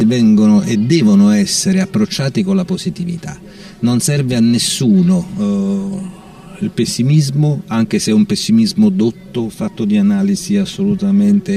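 One channel arrives late by roughly 5 ms relative to the other, and when the pair is folded to mono the shared material cancels itself at regularly spaced frequencies. This channel delay, or comb filtering, runs through the whole clip, carving fixed notches starting near 100 Hz and repeating about every 200 Hz above that. The result is a hollow, phasey, tube-like colouration.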